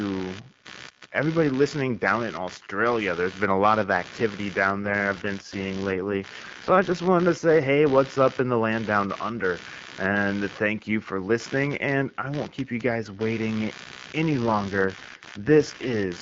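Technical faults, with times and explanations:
Throughout: computer activity noise. A buzzing, pulsing rasp sits about 20 dB below the speech and repeats around 70 times a second. It follows the computer's activity, not the talker. Processor, graphics or mouse load is shifting the shared ground, and the audio path picks it up.
4.66 to 7.02 s, and 14.30 s to the end: AMR rate drop. The speech turns rougher and more synthetic, with no gap and no loss of bandwidth. This fits the AMR-WB link falling from 12.65 to 6.6 kbit/s, with bits moved to error protection. The codec's light HD Voice character at the full rate returns after the first drop.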